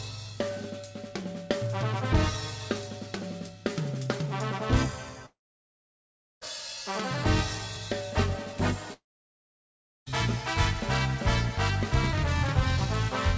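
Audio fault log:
5.26–6.43 s and 8.93–10.08 s, long network dropout: about 1.2 s goes missing each time, likely from packets never arriving. A brief fading buzz echoes the last sound, then about 1.1 s of silence. On a spectrogram, a blank band under the 8 kHz G.722 ceiling; the waveform goes flat.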